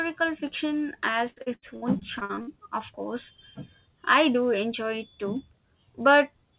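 From 1.3 to 2.49 s, the speech breaks up with repeated packet loss, giving a robotic sound. Packets kept going missing or arriving late. Each hole was patched by stretching the last sound, and another hole soon followed. About a third of the span is this patched filler, roughly 430 ms. The longest hole is 78 ms. The result is choppy, with pieces missing, clearing just before "of course". The call path's narrow band, nothing above 4 kHz, fits a G.711 mu-law codec.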